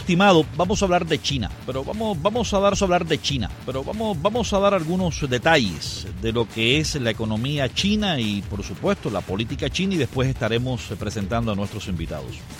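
At 2.72 s a stream segment is repeated. The player queued the same stretch of audio twice, so about 2.0 s plays again. The repeat runs until 4.72 s. A small blip marks the jump back to the earlier point.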